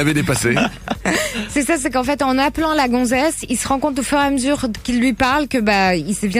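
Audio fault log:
Nothing to log here; no technical faults turn up anywhere in the audio.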